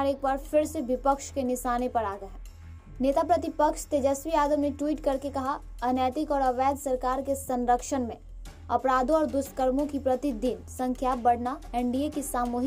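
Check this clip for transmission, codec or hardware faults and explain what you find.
Nothing in the clip points to a transmission, codec or hardware fault. No dropout, glitch or other disturbance can be heard anywhere in the audio.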